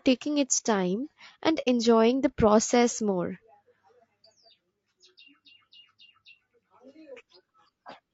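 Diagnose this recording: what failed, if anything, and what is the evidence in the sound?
Codec stage: the speech sounds rough and grainy throughout, with noise between harmonics, likely from low-delay AAC compression. The damage is plainly audible and fits AAC-ELD near 32 kbps, not broadband hiss.

Network or transport stage: at 1.61 to 1.68 s the sound fades into a soft-edged silence. This is AAC frame loss with muting, with about 60 ms blanked, which fits two zeroed frames. A hard buffer dropout would instead cut sharply and click.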